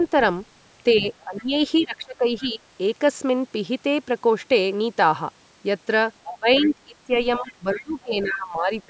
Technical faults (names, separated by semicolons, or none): other side's voice leaking through; speech suppressed in double talk